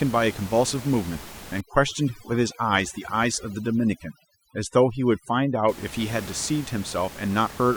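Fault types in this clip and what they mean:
Overdone noise removal: noise reduction set too strong shuts off bands near its noise estimate, leaving a reduced, twinkling background.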